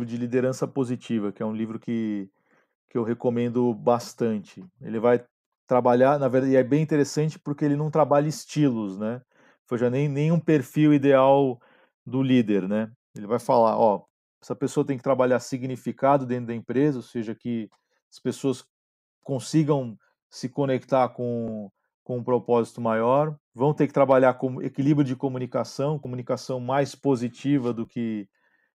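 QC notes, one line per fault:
No faults detected in this clip.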